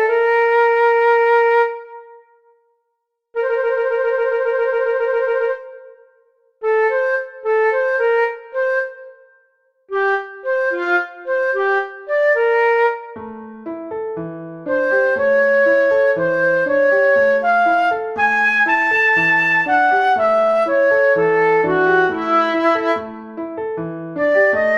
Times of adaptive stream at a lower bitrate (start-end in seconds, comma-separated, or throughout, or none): none